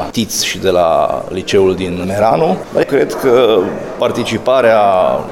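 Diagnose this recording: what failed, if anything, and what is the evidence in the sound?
Nothing seems to have failed anywhere in the chain here, since the sound holds steady all the way along with no sign of trouble at any stage.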